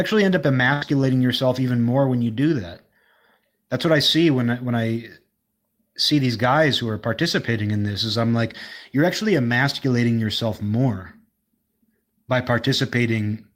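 Right at about 0.73 s, just after "end up", there's a burst of packet loss running to about 0.83 s. Roughly 80 ms of audio never made it, so the receiver kept stretching the last bit of sound it had and let it fade, which you hear as a brief held buzz or hiss. Then it jumps straight to "yourself even more when", with that stretch of speech simply gone.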